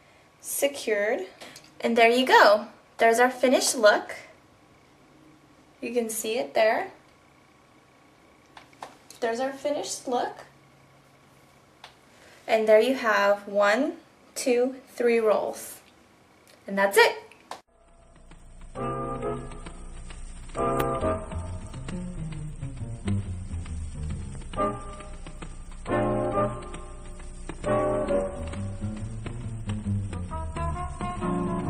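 No technical faults can be heard anywhere in the audio. Nothing in the sound points to a problem in how it was captured, processed or delivered.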